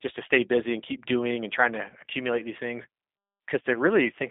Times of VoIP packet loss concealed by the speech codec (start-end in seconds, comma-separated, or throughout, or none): 3.74-3.77